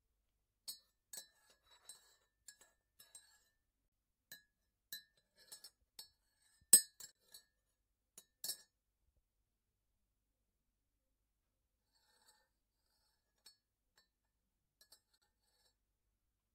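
At 7.12 to 7.15 s, the sound cuts out briefly. It happens again at 15.18 to 15.22 s. Both are digital broadcast dropouts. The receiver muted over a fast 3 ms fade. About 32 ms went missing each time, which fits one lost frame.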